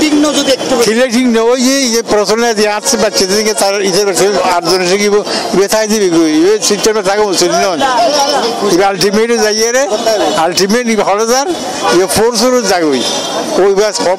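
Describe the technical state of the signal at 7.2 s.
At 7.2 s the audio shows hard clipping, present throughout the clip. Driven about 9 dB past the ceiling, roughly a tenth of samples are sliced flat, giving harsh high-frequency fuzz on every loud moment, unlike the rounder, warmer distortion of soft saturation.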